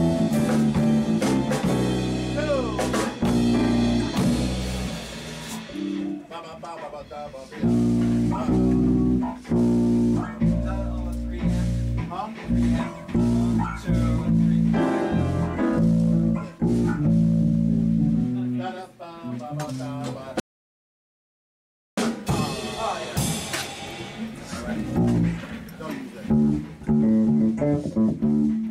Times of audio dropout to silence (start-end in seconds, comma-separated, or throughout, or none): 20.40-21.98